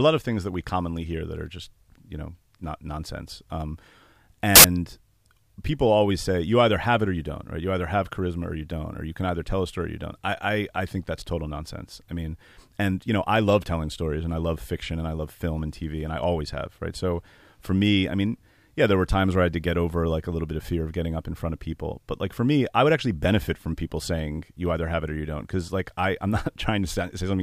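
Samples built from the wrong bytes appear from 4.56 to 4.64 s, a burst of loud, harsh broadband noise lasting under a tenth of a second. The bytes of each sample were assembled misaligned or in the wrong order, so the rapidly changing low bits became the large part of each value and the speech is replaced by harsh noise.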